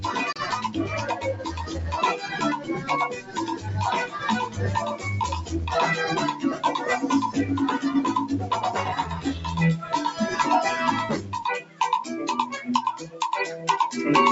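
A speech-oriented noise suppressor stays active for the whole clip, a noise suppressor applied to music or sounds. It treats sustained tones, ambience and decays as noise and pulls them down by about 10 dB, so held material pumps and thins while attacks pass through. The call microphone processing band-limits everything to 8 kHz.

At 0.32 to 0.39 s the output drops to silence for roughly 28 ms, then resumes as though playback had continued. This is likely a Bluetooth dropout, with packets arriving too late for the headphones, which fits about two lost frames.

Sound cut by the noise suppressor then occurs at 1.1 to 1.49 s, 2.57 to 2.9 s, 3.1 to 3.66 s, 11.61 to 11.8 s and 13.04 to 13.19 s. Each time the suppressor misjudges steady or decaying sound as noise, sinking it by about 9 to 12 dB and clipping tails short.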